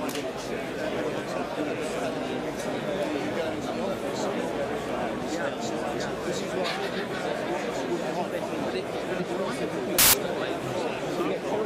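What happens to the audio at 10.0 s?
Samples built from the wrong bytes take over from 9.99 to 10.13 s, a burst of about 0.15 s. For that stretch the bytes making up each sample are assembled wrongly, shifted by one byte, swapped in order or read at the wrong alignment, so the rapidly changing low-order bits land in the most significant position. The result is a sudden blast of loud, harsh broadband noise replacing the sound.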